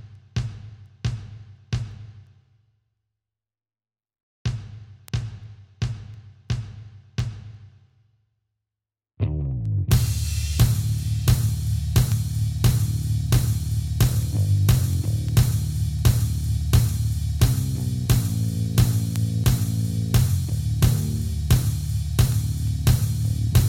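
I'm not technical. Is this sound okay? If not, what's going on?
No. There are word clock ticks from 0.15 s to 23.38 s: sharp clicks of uneven strength about every 0.4 s, roughly seventy in all. They happen because the device receiving the digital audio keeps its own time instead of following the sender's, and the two clocks disagree by a tiny amount, roughly 70 parts per million. Each time that gap adds up to a whole sample, one sample is dropped or doubled, and you hear a tick.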